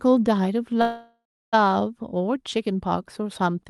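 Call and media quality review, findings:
Call audio freeze, 0.81–1.55 s: packets likely stalled in transit, jitter buffer ran dry; last sound stretched into fading buzz or hiss, then about 0.31 s silence; audio resumes intact, 0.71 s later.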